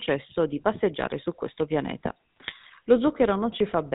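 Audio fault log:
throughout GSM full-rate codec. The speech has a buzzy, gravelly roughness and nothing above 4 kHz. The codec models the vocal tract and excites it with sparse regular pulses. That coarse excitation causes the grit. The damage is plainly audible, which fits a 13 kbps full-rate stream.
2.37–2.54 s GSM bit errors. Right after "passeggiare su questo pianeta" the speech breaks into squawks and gargling for about 0.17 s. Corrupted filter, pitch and gain values warp the spectrum and jolt the level. The pattern points to several damaged frames on a weak link.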